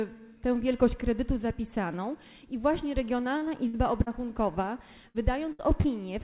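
Short concealed packet loss at 3.38–3.43, 4.03–4.08 and 5.81–5.86 s: about 40 ms went missing each time and was patched by extending the preceding sound, leaving only a quick smear or wobble that blends straight back. Bursts of packet loss at 3.67–3.75, 5.08–5.16 and 5.52–5.61 s each lose about 60 ms. The fill is longer and fades into a held buzz or dying hiss, and the sound picks up further along with a piece skipped. Throughout, nothing is heard above 4 kHz, which fits a narrowband telephone codec such as G.711.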